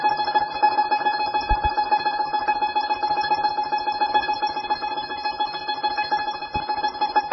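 Music with heavy MP3 compression throughout, likely from a very low bitrate around 16 kbps: nothing above 5.6 kHz survives, giving a flat spectrogram ceiling, swirly watery texture and smeared attacks. Two loud pops sit on top of the music, each a double pop from a likely voltage step or switching glitch. The first, at 1.51 to 1.68 s, rises roughly 10 dB above the signal; the second, at 6.56 to 6.64 s, is roughly 5 dB above. On the waveform they appear as paired narrow spikes, and on the spectrogram as thin vertical stripes up to the 5.6 kHz ceiling.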